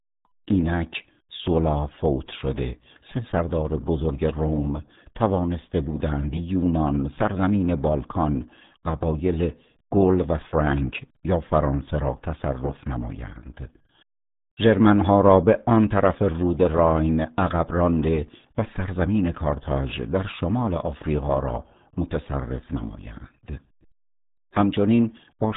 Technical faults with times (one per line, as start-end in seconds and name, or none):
0.00-25.56 RealAudio 14.4 codec